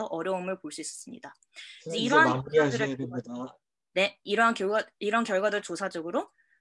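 The signal carries no audible technical faults at any point in the clip.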